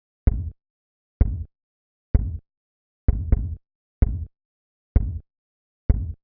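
No technical faults can be heard anywhere in this clip.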